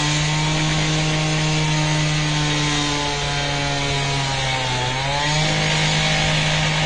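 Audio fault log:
throughout, AAC compression: likely low-bitrate AAC-LC coding, fitting roughly 32 kbps, cuts everything above 9.5 kHz and quantises coarsely, leaving the sound dull with plainly audible coding damage.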